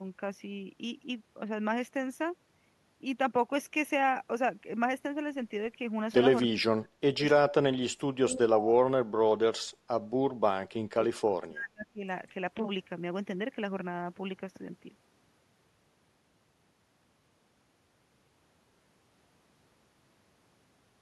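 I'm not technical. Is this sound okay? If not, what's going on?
No. The speech drops away and partly cuts out three times: 6.48 to 7.53 s, 8.13 to 9.97 s, and 10.7 to 12.03 s. This is speech suppressed in double talk. Likely both sides spoke at once, and the echo canceller turned this voice down by mistake.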